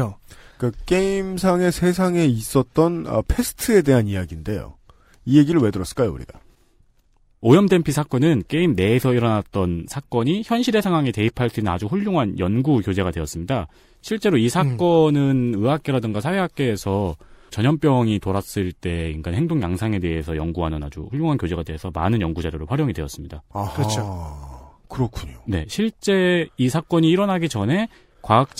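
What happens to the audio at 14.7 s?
Nothing goes wrong at 14.7 s: the speech carries on intact through that moment with no dropout, click or distortion.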